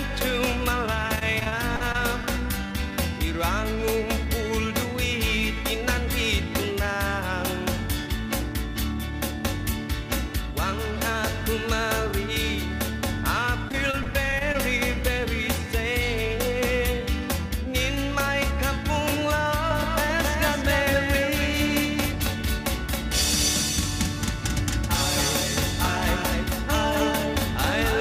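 From 1.15 to 1.96 s the sound turns choppy and robotic, with small pieces missing. This is repeated packet loss: eight gaps, the longest 38 ms, each patched by stretching the last sound.

Between 2.23 and 2.92 s the audio drags at unchanged pitch, running at 96% speed. A jitter buffer slow-down repeated short segments, adding 35 ms to rebuild its reserve.

From 13.68 to 14.56 s the same choppy, robotic break-up returns. More repeated packet loss produced seven gaps here, the longest 23 ms, each concealed by continuing the preceding sound.

At 19.7 s a full-band echo switches on abruptly and stays until the end, trailing about 0.3 s behind and roughly 5 dB quieter, with no room colour. This doubled audio track is likely a second copy mixed in, either from a slower capture path or from an edit holding two copies out of step.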